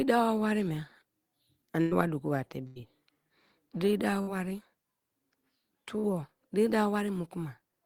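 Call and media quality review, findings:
Burst of packet loss, 1.81–1.93 s, just before "wa doku", and 2.67–2.78 s. Receiver-side concealment: late or lost packets, gap bridged by extending the last sound while fading it down, heard as a held buzz or a decaying hiss. Roughly 98 ms filled against 100 ms of missing speech in the first event, and 85 ms filled against 80 ms missing in the second. Speech resumes past the dropped portion. Probable component: network path and jitter buffer.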